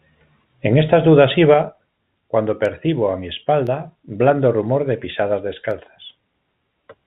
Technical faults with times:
2.65-6.73 periodic USB or driver dropouts

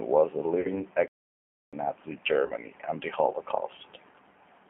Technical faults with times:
0.00-4.69 G.729 codec
0.61-0.83 VoIP packet loss concealed by the speech codec
1.08-1.73 playback stall
2.46-2.52 VoIP packet loss concealed by the speech codec

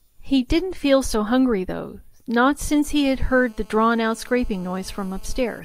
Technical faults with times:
2.90-5.60 GSM phone buzz

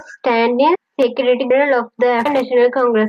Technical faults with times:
0.75 audio missing between chunks
1.50 audio missing between chunks
2.25 audio missing between chunks

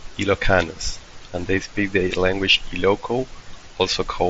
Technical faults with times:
none

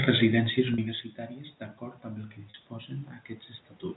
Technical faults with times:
0.74-0.78 packet loss with pitch repetition
2.50-2.54 packet loss with pitch repetition

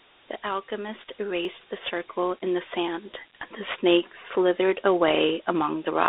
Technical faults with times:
0.00-6.09 low bit depth with noise shaping
0.00-6.09 Dialogic VOX ADPCM
1.45 block of digital silence

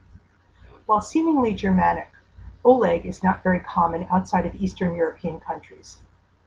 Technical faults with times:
none

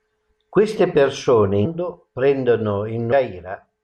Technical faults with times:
1.64-1.66 damaged data in a compressed stream
3.11 damaged data in a compressed stream

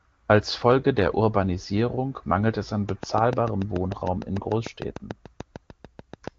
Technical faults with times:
2.89-6.29 train of clicks

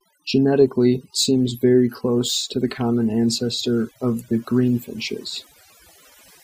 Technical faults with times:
0.00-6.44 overdone noise removal

